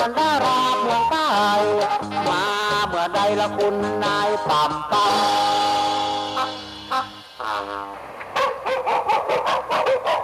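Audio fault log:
No fault to log.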